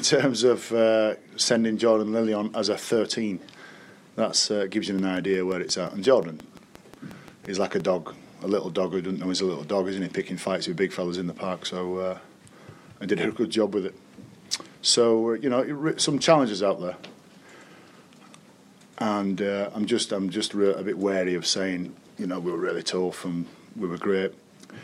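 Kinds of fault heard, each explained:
Train of clicks: From 4.99 to 7.81 s, about fifteen evenly spaced pops arrive at 5.7 per second, peaking a few decibels above the sound, likely from interference. They appear as regular thin vertical broadband stripes on a spectrogram and sharp identical spikes on the waveform.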